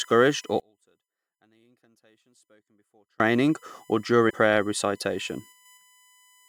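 Right from the start there's a USB whine running under the speech for the whole clip. It's a fixed 1 kHz tone with its strongest component at the 2 kHz harmonic, sitting roughly 35 dB down, with bus frame current leaking into the audio ground or supply.

From 0.60 s to 3.2 s the speech almost disappears, dropping by about 38 dB into a faint remnant. That's what you'd hear if one channel were inverted and the pair then summed to mono, which is the likely cause here. The shared centre content cancels and only the small left-right difference survives.

Between 4.29 and 4.31 s the audio jumps forward abruptly with a small blip. A stream segment being skipped, with the player moving straight on to the next chunk, is the likely explanation. A stretch of the speech is simply gone at that point.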